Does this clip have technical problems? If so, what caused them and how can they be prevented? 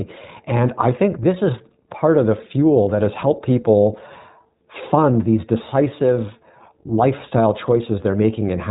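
Yes. The whole clip carries iLBC codec damage. Nothing above 3.8 kHz survives, and speech sounds rough and synthetic, which fits 15.2 kbps with 20 ms frames. Use a wideband codec with a higher bitrate instead.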